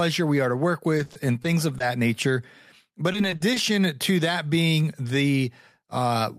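From 0.97 to 1.82 s, then 3.12 to 3.58 s, repeated packet loss breaks the speech up. Short holes are patched by stretching the last sound, so it turns choppy and robotic. The second burst has longer gaps, up to 40 ms.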